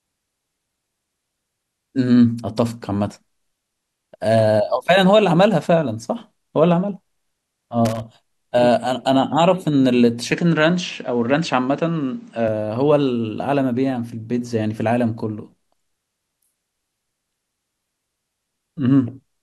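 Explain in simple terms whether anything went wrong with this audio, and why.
Loose connector crackle hits from 7.85 to 8.00 s: a brief burst of scratchy crackling. A worn or dirty plug contact was briefly losing and regaining connection as it shifted, chopping the signal into rough fragments.

Input switched to a poorer device, likely another microphone or a headset, from 10.32 to 12.48 s. The speech turns duller because the highest sounds, above 8.3 kHz, vanish, and a faint new background noise appears. Loudness stays the same and there's no gap at the changeover.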